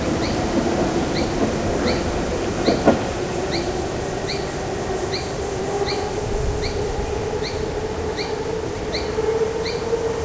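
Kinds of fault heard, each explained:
wrong sample rate: The samples are being played back more slowly than they were captured, with no rate conversion, consistent with 22 kHz material run at 16 kHz. Everything runs at 0.726 times normal speed and drops about 5.55 semitones in pitch, sounding sluggish and low throughout.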